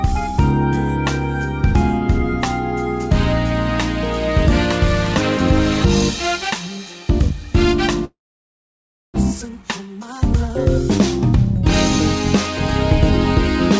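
The audio passes through a call codec, likely wideband G.722, with nothing above 8 kHz. From 8.05 to 9.18 s, a long network dropout is the likely cause. The sound decays into a fading buzz or hiss, then silence, and resumes with material lost. From 9.41 to 10.50 s, a jitter buffer speed-up runs the audio about 8 percent fast at unchanged pitch. It trims roughly a tenth of a second to reduce delay.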